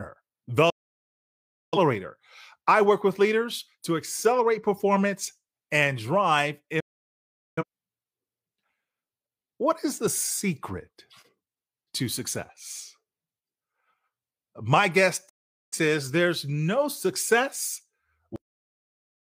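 Digital broadcast dropouts at 0.70–1.78 s, 6.80–7.63 s and 15.29–15.77 s in this speech clip: the receiver muted with an 8 ms fade after losing frames, so roughly 1 s, 0.8 s and 0.4 s of programme vanish. Cut-off end at 18.36 s: the final buffers were never played, so the audio stops mid-sound into abrupt digital silence with no decay.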